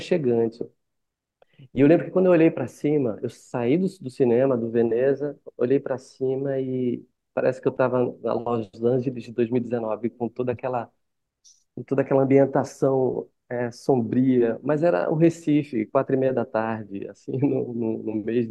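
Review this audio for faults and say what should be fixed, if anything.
Nothing to fix: no faults were found in this audio, so no corrective work is needed.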